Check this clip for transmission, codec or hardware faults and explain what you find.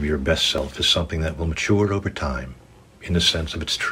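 There is one fault, repeated three times: audio missing between chunks. At 0.58 s, 1.56 s and 3.52 s the sound jumps forward abruptly, dropping around 20 ms with no silence in its place. The skips are spaced at multiples of about one second, likely from a recorder losing a sliver at each one-second chunk boundary.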